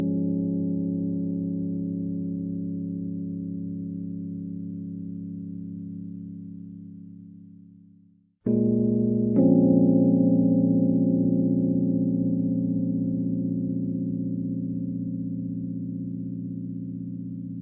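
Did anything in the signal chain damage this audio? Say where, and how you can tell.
No, nothing damaged this audio.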